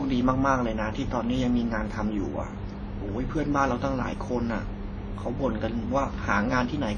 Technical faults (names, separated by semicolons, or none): WMA compression